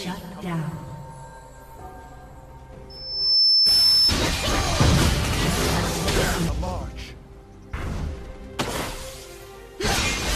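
At 2.90 s a single high tone near 5.3 kHz swells out of the audio over roughly half a second and holds as a piercing whistle until 4.15 s, sitting about 10 dB above the sound around it. This is loudspeaker feedback squeal. A microphone was picking up the loudspeaker it was feeding, and at that one frequency the loop gain rose above unity, so the tone fed on itself.

Inside the squeal, at 3.86 s, a short stutter plays the same 23.2 ms fragment two extra times, which fits one compressed frame being repeated. At 6.67 s a 46.4 ms stretch is heard twice in a row, consistent with a pair of frames. Both are repeated frames: the decoder received or read the same frames more than once and played them again. Each event lengthens the audio by 46.4 ms.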